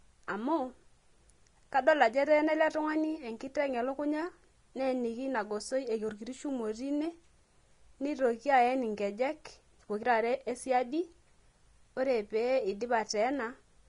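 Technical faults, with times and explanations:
Throughout, Vorbis compression: coarsely quantised treble becomes grainy hiss, with a spectrogram ceiling at 10.6 kHz, likely from encoding around 32 kbps.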